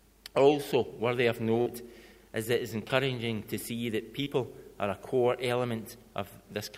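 At 1.61, 2.88 and 4.23 s, short concealed packet loss leaves brief smears, each 20 to 40 ms of audio that arrived too late and was filled with 16 to 45 ms made by extending the preceding sound. On a spectrogram each shows as a short stretch of smoothed, repeated pattern before the real detail resumes.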